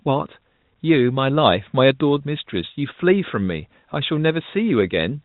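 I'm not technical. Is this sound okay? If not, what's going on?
Yes, nothing stood out as wrong when listening to this speech.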